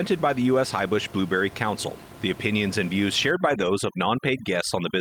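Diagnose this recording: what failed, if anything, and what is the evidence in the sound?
Call processing: overdone noise removal from 3.31 s to the end. Bands near the noise estimate are cut hard, so the background twinkles and quiet parts of speech are cut with it.

Network and codec: six lost packets rebuilt from error correction between 3.45 and 3.67 s. No gap, but about 120 ms of rougher, noisier audio.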